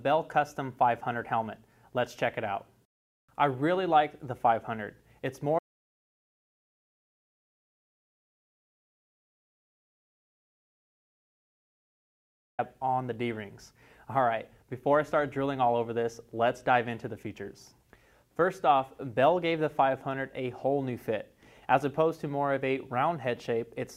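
At 5.59 s the sound cuts off abruptly and the track falls to silence until 12.59 s, a gap of about 7.0 s. This is an audio dropout to silence: no room tone or noise floor survives, so the input was most likely lost upstream, through a disconnection, failed link or mute, while the recorder kept writing silence. Whatever occurred during those seven seconds is missing, and the sound resumes mid-flow at 12.59 s.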